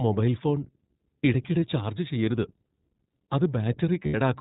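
Speech heard through a narrowband channel: it sounds clearly rough and faintly synthetic, with nothing above 4 kHz, so sibilants are dull and the top end is missing. This is iLBC codec coloration. The damage is plainly audible and fits the 15.2 kbps mode with 20 ms frames. Each frame's excitation is coded without reference to the previous one, which keeps the speech intelligible but leaves a coarse, artificial texture. Two brief holds interrupt the speech. From 1.60 to 1.62 s there is a 20 ms buzzy, slightly breathy hold. From 4.06 to 4.15 s there is a longer one of about 90 ms that fades as it continues. These are lost iLBC frames, about one frame at the first gap and four at the second. The decoder concealed each loss by repeating the last pitch cycle mixed with noise, which produces the held, vowel-like sound. Because iLBC frames stand alone, clean speech returns almost immediately after each gap.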